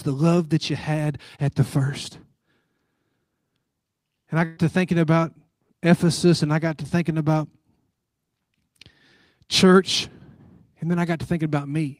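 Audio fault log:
4.45 to 4.60 s, burst of packet loss: about 120 ms of speech never arrives in time, just before "to thinking about". The receiver covers roughly 110 ms of the gap by repeating the last sound it received and fading it down, so there is no silence. Instead the preceding sound hangs on as a brief, dimming smear. The speech then resumes further along, and the stretch in between is simply missing.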